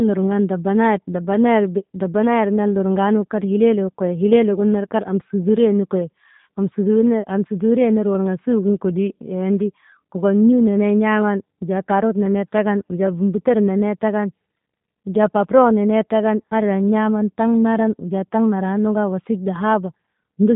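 Throughout, the speech carries G.729 codec damage: nothing above 3.8 kHz, plus a rough, buzzy synthetic texture from pulse-rebuilt excitation, which a plain low-pass filter wouldn't add, fitting an 8 kbit/s stream.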